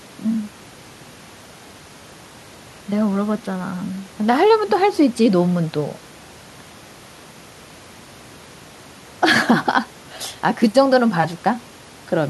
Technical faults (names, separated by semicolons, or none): none